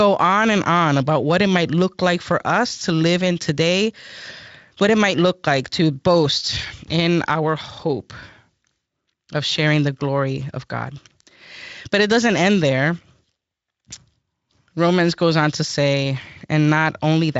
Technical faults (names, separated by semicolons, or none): none